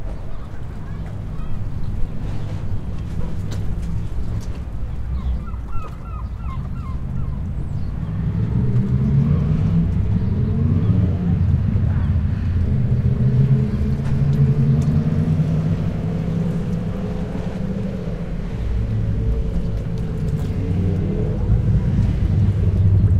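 No technical faults can be heard in this recording of sounds. There is no event in the audio that needs a time or an explanation.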